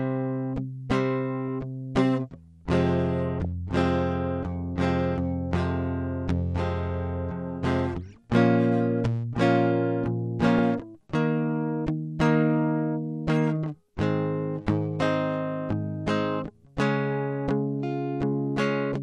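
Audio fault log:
Throughout: MP2 compression. The music is dull and gurgly, likely from a low MP2 rate near 80 kbps. Upper bands switch off, so the spectrogram shows a flickering ceiling.
3.39–3.45 s and 10.47–10.59 s: DAB burbling. Bit errors (a fraction of a percent) corrupt sub-bands, causing short blips of noise in single sub-bands. These appear as isolated band-shaped bursts in the spectrogram.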